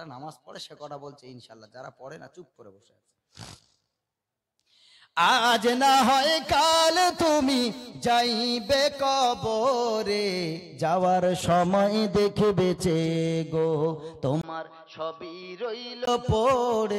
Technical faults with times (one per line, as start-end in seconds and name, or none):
14.41-16.07 input switched to a poorer device